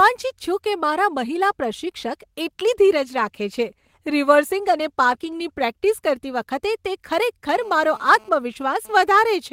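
From 2.67 to 5.71 s the speech turns rough and watery: a call bitrate drop, consistent with the encoder falling from roughly 32 to 17 kbps and coding more coarsely. From 7.11 to 9.01 s a hard, raspy, intermittent buzz sits about 28 dB below the speech. This is GSM phone buzz, with 2G bursts at 217 Hz rectified by the audio circuitry during a data transfer.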